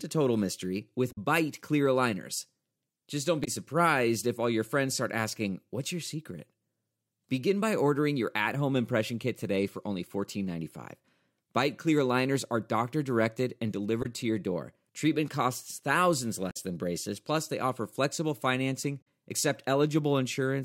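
It's a speech clip, and it has damaged data in the compressed stream in five spots: 1.11 to 1.18 s, 3.44 to 3.48 s (just before "surprised if all your"), 14.02 to 14.06 s (between "are doctor directed and" and "to your door"), 16.50 to 16.57 s (after "costs thousands", before "than braces plus they"), and 19.01 to 19.07 s. Each is a brief glitch, 40 to 70 ms long. Bad bytes knock the decoder out of sync until it finds the next frame header.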